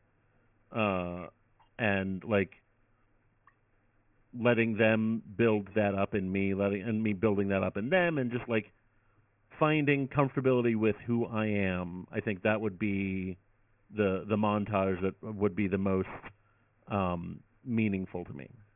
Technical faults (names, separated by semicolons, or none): aliasing